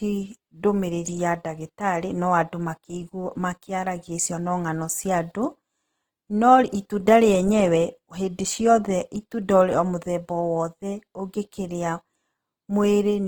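Throughout, the speech was likely squeezed through Opus compression in its music mode at a rate that fits about 16 kbps, leaving it plainly grainy, rough and noisy across the full band.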